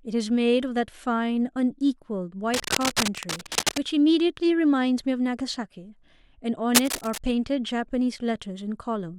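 A speech clip with cable scratch noise from 2.54 to 3.82 s and 6.75 to 7.19 s. Dense, uneven scratching sits over the speech, a little below it, then about as loud. A worn, moving cable or connector is the likely cause.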